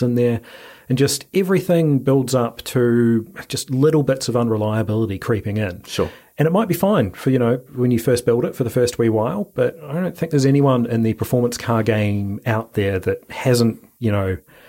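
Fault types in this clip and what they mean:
Low bit depth with noise shaping, throughout: the speech is stored with very few amplitude steps, a resolution that points to about 10 bits, and the rounding error from each step is fed back so its energy is pushed up toward high frequencies instead of spreading evenly. The result is a constant, thin hiss sitting roughly 35 dB below the speech, strongly tilted toward the top of the band and audible in pauses as well as under the words.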